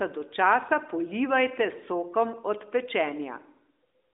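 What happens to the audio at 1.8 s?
Nothing goes wrong at 1.8 s: the speech carries on intact, with the narrow telephone-band sound of the AMR narrowband mobile codec at 12.2 kbps.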